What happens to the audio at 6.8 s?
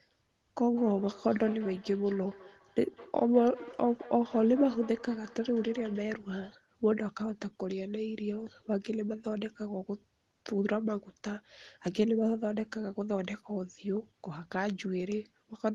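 Nothing goes wrong at 6.8 s; the speech runs on there without any dropout, glitch or other technical fault.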